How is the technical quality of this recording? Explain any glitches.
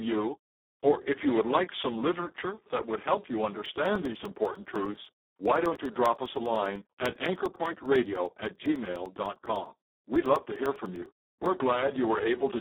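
Technical quality is poor: the speech is heavily coded and, for most of its length, punctured by a steady train of ticks.

Throughout, the voice sounds hoarse, buzzy and edging toward robotic, confined to a narrow telephone-like band of about 250 Hz to 3.6 kHz with nothing above 3.8 kHz. This is Speex codec damage at a very low bitrate of about 4 kbps, leaving too few bits to model the excitation faithfully.

From 3.66 s, right after "that would help you", until 11.46 s, regular ticks occur every 0.1 s during the speech. These are periodic USB or driver dropouts: the audio path stalls at a fixed interval, and each time roughly 2 ms is lost and replaced by silence.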